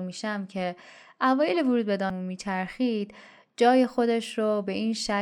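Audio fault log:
2.10 s, CD skip: the laser jumps to another turn of the disc's spiral, so the speech briefly mutes with a tick and resumes from a different point.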